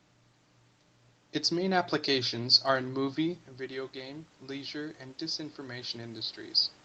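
From 2.97 to 6.66 s, automatic gain rising lifts the level by about 6 dB after the input drops about 11 dB; room noise swells with the speech, unlike the talker moving away around 3 s.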